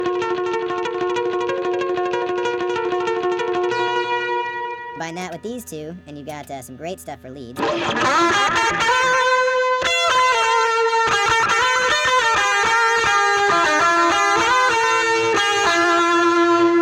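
Wrong sample rate, throughout the whole clip: the audio runs about 1.38 times too fast and sits roughly 5.6 semitones high, because material recorded at 32 kHz is being played back at 44.1 kHz without conversion, so speed and pitch rise together by that ratio.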